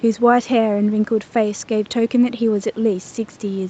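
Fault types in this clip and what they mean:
No faults can be heard in this speech clip. The sound stops at about 8 kHz, which fits a call path that passes only that band, and the room noise stays well below the speech, about 29 dB down.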